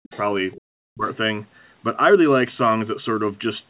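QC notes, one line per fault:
0.03–0.19 s and 0.52–0.61 s: other side's voice leaking through. Two short scraps of a second voice sit far beneath the main talker, roughly 25 dB down. This is likely loudspeaker sound from the far end that the echo canceller failed to fully remove from the microphone. It shares the same narrow telephone band as everything else, cut off at 4 kHz, which fits a G.711 call codec.
0.82–1.08 s: speech suppressed in double talk. The talker's level collapses by around 40 dB for about a third of a second and then recovers, while the far side is active. The likely cause is the echo canceller mistaking simultaneous talk for echo and attenuating everything together. A dropout from packet loss would cut more abruptly, with a concealment buzz or repeated fragments. Here the level dips and returns without that.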